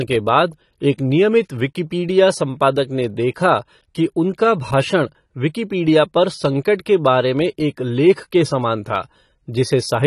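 Throughout, the speech sounds dull and smeared, with nothing above 12.1 kHz and fizzy sibilants, likely from AAC compression at a low bitrate around 32 kbps.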